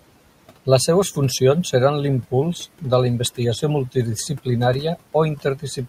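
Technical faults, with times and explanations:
Throughout: noise suppressor artifacts. The suppressor judges each frequency band frame by frame and pulls what it takes for steady noise down by about 18 dB, so the room noise, about 19 dB below the speech, sinks in the pauses and swells back up beneath speech.
5.36–5.79 s: speech cut by the noise suppressor. Here the suppressor mistook quiet parts of the speech for background and turned them down with it, by up to about 15 dB, over roughly 150 ms in all, so those sounds come across as swallowed or faint.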